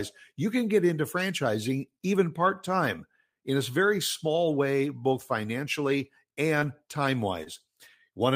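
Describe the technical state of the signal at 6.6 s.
Right after "small way both financially", from 6.59 to 6.63 s, there's a short concealed packet loss: about 20 ms of the speech never arrived, so the decoder extended the preceding sound to cover it and then blended back in. You hear it as a quick smear or wobble.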